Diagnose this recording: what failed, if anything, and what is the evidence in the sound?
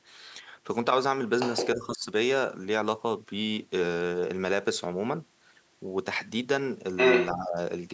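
Call processing is where this falls over, twice over. First, the other side's voice is leaking through: from 1.4 to 1.67 s there's a second voice sitting a little under the talker, and from 6.96 to 7.34 s it comes back a bit louder than the talker. The likely cause is loudspeaker pickup that the echo canceller didn't fully remove.

Right on the heels of each leak, the talker's speech is suppressed in double talk. From 1.76 to 2.06 s the voice dips by around 10 dB, and from 7.33 to 7.58 s it sinks about 15 dB, each hit lasting roughly a third of a second. The canceller likely couldn't split near-end speech from echo, so it ducked both.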